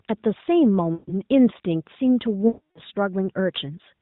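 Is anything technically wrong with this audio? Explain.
Yes. Lost AMR speech frames occur twice, from 0.94 to 1.15 s and from 2.48 to 2.80 s. When frames failed, the decoder kept repeating its last pitch and vocal tract settings with falling gain. The speech therefore smears out and fades toward silence, most completely during the longer second gap, and returns briefly weak or rough. The narrowband AMR codec limits this speech to below 4 kHz.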